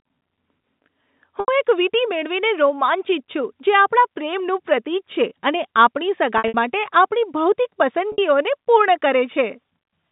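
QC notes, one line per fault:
1.40 to 8.18 s, packet loss with pitch repetition: at 1.40 s, 6.38 s and 8.12 s the sound briefly holds on a buzzy, frozen tone. Gaps of 80 ms and 60 ms, plus 120 ms scattered over 160 ms at 6.38 s, were bridged by repeating the last pitch period, fitting 20 ms packets.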